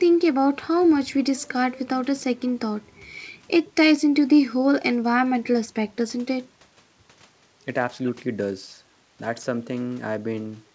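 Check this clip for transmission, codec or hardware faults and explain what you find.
No faults found here.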